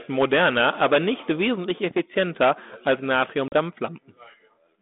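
At 3.48 to 3.54 s, packet loss on the ADPCM call cuts a hard-edged 40 ms hole, about a couple of packets. The decoder's adaptive predictor and step size lose track of the sender's, so the speech re-enters with brief distortion over the 32 kbit/s G.726 line.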